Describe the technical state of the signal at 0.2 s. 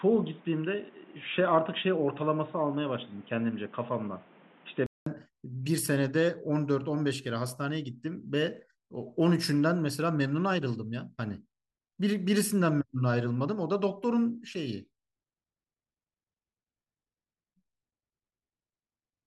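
At 0.2 s the speech is dull and boxy. An input switched to a poorer device, likely a different microphone, cuts everything above 3.8 kHz from 0.0 to 5.06 s and adds noise about 30 dB down. A spectrogram shows a flat 3.8 kHz ceiling, and the waveform a 200 ms gap at the switch.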